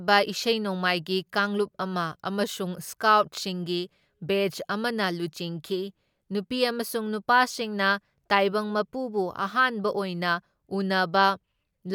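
No technical faults can be heard anywhere in the recording; the speech signal stays steady and intact with no breaks, level jumps or added disturbances at any point.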